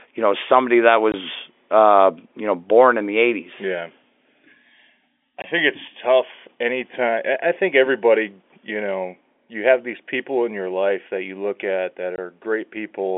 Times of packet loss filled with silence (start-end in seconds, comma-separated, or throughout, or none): 1.12, 5.42-5.44, 12.16